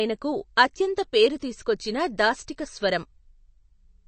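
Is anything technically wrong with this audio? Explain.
Yes, it has MP3 compression damage throughout, likely from a low bitrate around 36 kbps. The encoder has cut the treble, leaving nothing above about 8.3 kHz. Weak frequency lines drop in and out between frames, so the speech sounds dull, watery and swirly, with chirpy s sounds.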